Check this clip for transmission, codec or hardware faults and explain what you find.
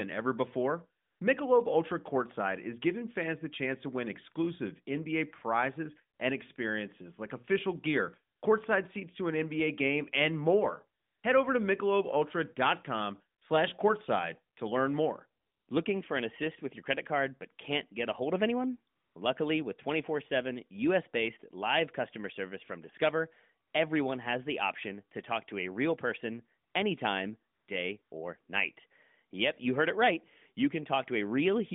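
One fault recurs: AMR comfort noise, heard over a narrowband phone line passing roughly 150 Hz to 3.6 kHz, with light coding that fits AMR-NB at 12.2 kbps.

AMR comfort noise appears eleven times between about 1.0 s and 28.1 s, each lasting 20 to 260 ms. The longest are at 11.0 s and 15.4 s. One brief insertion at 6.18 s comes just before "and experiences like official", and two come right after "a real person anytime" at 27.54 s and "real person anytime day" at 28.02 s. The sender judged these moments silent and stopped sending speech frames, so the receiver substituted smooth synthetic noise for the real background. The result is a steady hiss that switches in and out, not a dead gap or a repeated fragment as with packet loss.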